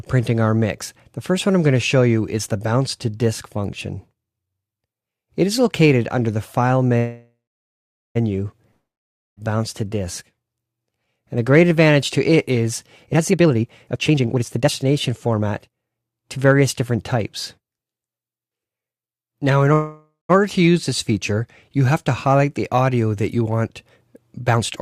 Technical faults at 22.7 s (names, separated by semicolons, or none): none